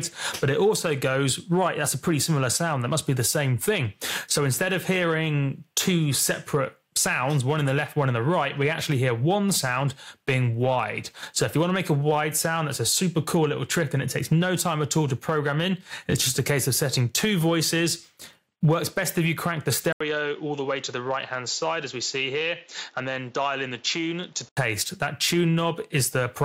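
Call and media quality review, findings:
19.93–24.57 s: 80 ms gap, audio cut above 7.4 kHz, about 5 dB quieter, new noise floor. Likely input switched to a poorer device, not codec narrowing.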